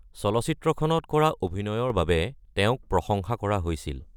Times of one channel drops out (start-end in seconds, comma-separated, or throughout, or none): 1.48-1.90